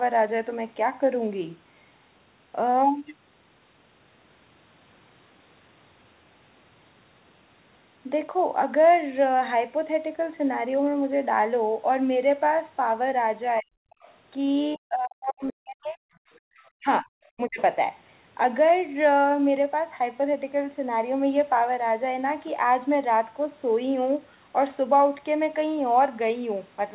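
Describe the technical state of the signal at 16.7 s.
At 16.57 to 16.7 s, a faint trace of the other side's voice leaking through sits well below the speech, likely residual loudspeaker echo that the echo canceller failed to remove. From 16.79 to 17.1 s, speech is suppressed in double talk: the level drops deeply for about a fifth of a second, likely because the canceller turned down the near-end signal along with the echo.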